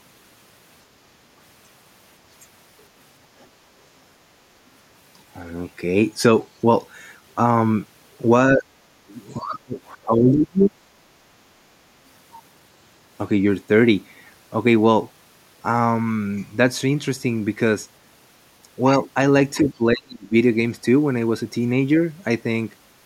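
At 3.40 to 3.46 s a brief, very faint trace of the other side's voice leaking through appears, roughly 40 dB below the talker. The loudspeaker's sound likely reached the microphone and the echo canceller left a small residue behind. On a spectrogram it is a faint, short smear of harmonic energy beneath the main speech, almost invisible on the waveform.

Speech suppressed in double talk follows at 8.53 to 8.65 s, where the talker dips by about 10 dB for roughly a tenth of a second. The likely cause is the echo canceller failing to separate its own talker from the incoming side while both spoke, and turning everything down. The same fault recurs more deeply at 9.40 to 9.78 s and 9.94 to 10.78 s, with drops of around 25 dB, and at 19.94 to 20.34 s, where the talker is nearly wiped out at around 40 dB down. The waveform shows sudden notches in the speech envelope, and the spectrogram shows whole columns, the highs especially, fading to dark.

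Between these, at 8.96 to 9.00 s, the background is gated by the echo canceller. The microphone is pulled down hard for about 40 ms, a drop of about 14 dB, while the loudspeaker plays. The room tone briefly dips and snaps back, seen as a short gap in the noise floor on the spectrogram and a flat dip on the waveform.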